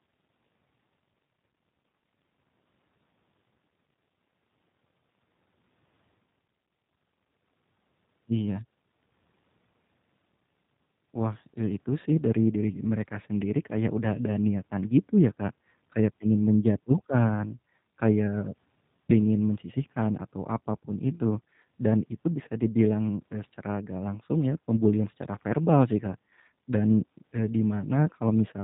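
Speech runs the whole clip with a plainly audible rough, synthetic quality and nothing above 4 kHz, the sound of the G.729 codec. It rebuilds each 10 ms frame from a vocal tract filter, a pitch predictor and a few pulses, which fits an 8 kbit/s voice-over-IP link.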